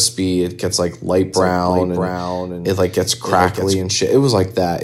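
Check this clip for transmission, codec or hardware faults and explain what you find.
One fault is present: a doubled audio track from 1.34 s to 3.82 s, starting just after "it gets like light". A second full-band copy of the speech runs about 0.7 s behind the original and sits roughly 5 dB lower. The likely cause is a second capture path with extra latency, or an edit that left two offset copies. The echo has no decay or room colouring, and it switches in and out abruptly at both ends.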